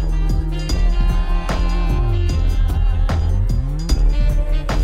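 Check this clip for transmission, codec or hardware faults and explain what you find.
Nothing stood out on listening to this audio.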